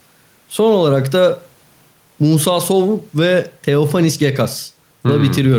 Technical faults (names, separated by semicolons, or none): gain pumping